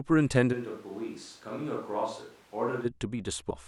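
From 0.54 to 2.84 s the speech turns hollow and roomy, about 10 dB quieter with less bass, and a room-noise floor only about 25 dB below it appears. This is likely a switch to a distant microphone. On the waveform, the envelope steps down abruptly, and the spectrogram shows thinned low end, reverberant smearing and a raised noise floor.

From 3.50 to 3.54 s a brief glitch cuts in as damaged data in a compressed stream throws the decoder out of sync until it finds the next valid frame. The spectrogram shows a short disruption at that point.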